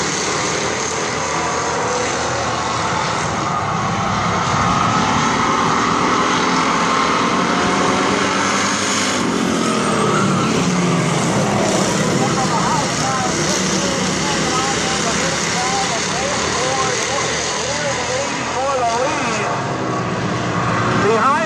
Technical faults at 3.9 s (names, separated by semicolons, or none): none